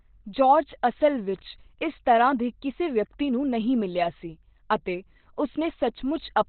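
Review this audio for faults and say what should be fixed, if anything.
The whole clip sounds muffled and hoarse, with nothing above 4.2 kHz, which is likely Opus compression dropped into its narrowband SILK speech mode at a starved bitrate, something around 12 kbps. The codec damage is heavy. To prevent it, give the encoder more bitrate or force a wider bandwidth so it stays out of narrowband mode.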